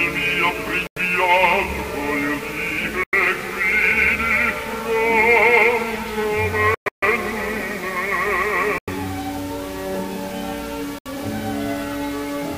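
Bluetooth dropouts at 0.87, 3.03, 8.78 and 10.98 s cut the sound to silence for about 70 to 90 ms. A longer patch from 6.74 to 7.03 s stutters with several gaps. The likely cause is wireless packets arriving too late, with playback resuming further on.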